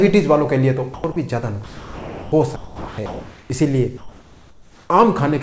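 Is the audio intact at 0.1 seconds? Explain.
Yes, the audio is intact at 0.1 seconds, with only the ordinary character of a G.722 call path, whose content stops at 8 kHz.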